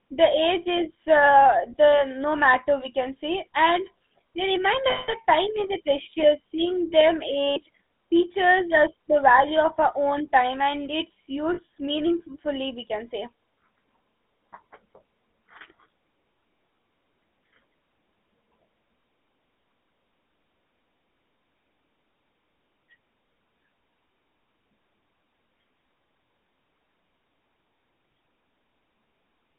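Throughout, the speech passes through the GSM full-rate codec, which fits 13 kbps coding. It rebuilds the voice from a vocal-tract model driven by sparse regular pulses, inside a line band of roughly 200 Hz to 3.5 kHz. The result is a plainly audible buzzy, gravelly roughness and a narrow, muffled top.

Lost GSM frames occur at 4.90 to 5.14 s, 7.46 to 7.61 s, and 11.54 to 11.60 s, between "own time and its" and "meaningfully we can say". At each, the decoder repeats the last good frame. The sound smears into a brief metallic ring instead of the speech that should be there.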